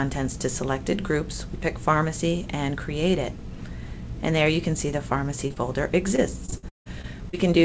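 Short concealed packet loss strikes twice in quick succession, at 5.48 to 5.52 s and again at 5.54 to 5.58 s. Each time roughly 20 ms of the call arrived too late, and the receiver bridged the hole by extending the preceding sound before fading back into real audio, leaving a brief smear or wobble. Repeated packet loss with a robotic sound follows from 6.16 to 7.35 s. Seven separate gaps, the longest 170 ms, are each patched the same way, so a little over a quarter of that stretch is synthesised fill, giving choppy audio with pieces missing. Underneath, the call audio has nothing above 8 kHz, which fits a wideband call codec such as G.722.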